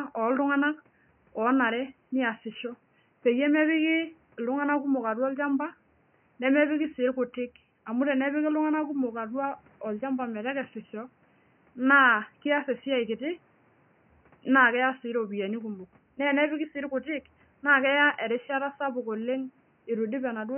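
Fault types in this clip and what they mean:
Nothing to flag here: no faults turn up in this speech clip, just the room's own background noise sitting about 38 dB below the speech.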